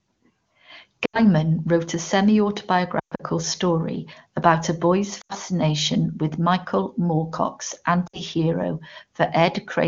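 Lost AMR speech frames occur at 1.05–1.22 s before "wrote a", 2.99–3.21 s before "story about a boy's", 5.21–5.33 s after it, and 8.08–8.21 s. Failed frames are replaced by the last good one at falling gain, so the sound smears and fades. Spectrograms show frozen, dimming harmonics.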